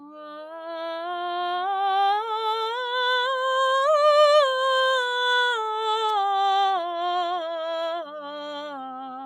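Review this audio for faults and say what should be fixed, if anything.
From 0.0 to 0.48 s, the music is pulled down by as much as about 8 dB, a clear case of sound cut by the noise suppressor. Its gain stage misread the opening half second of music as background noise and attenuated it. On a waveform the envelope is visibly shrunk at the start; on a spectrogram the low-level harmonic detail and decay tails look thinned before full density returns. To prevent it, lower the suppression depth or raise its threshold so tonal, sustained music isn't classed as noise.

At 6.09 s, a sharp snap sits on top of the music. This is an electrical switching spike, likely a nearby switch, motor or static discharge arcing and coupling into the audio line. A waveform shows a near-vertical needle standing out from the surrounding signal; a spectrogram shows a thin vertical stripe spanning the full frequency range for only a few milliseconds. 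To prevent it, shield and ground the cabling and keep switching loads and their wiring away from the audio path.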